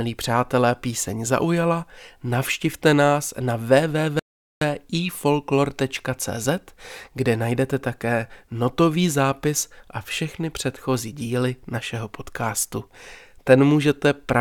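At 4.19 s the speech just drops out, dead silent, until 4.61 s, so a gap of roughly 0.42 s mid-flow before it carries on. That's a playback stall, likely the player starving for data or its thread getting blocked briefly.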